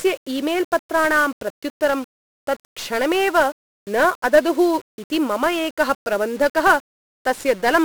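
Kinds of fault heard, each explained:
1-bit DFPWM compression: The speech is thick with coarse, fuzzy crackle from start to finish, and a steady wash of broadband hiss buries the upper frequencies so consonant detail is smeared. The damage is heavy. The codec keeps only one bit per sample, nudging an adaptive level up or down each step, so the waveform is rebuilt as a rough staircase and the error becomes constant noise. The grain fits a stream of about 48 kbps.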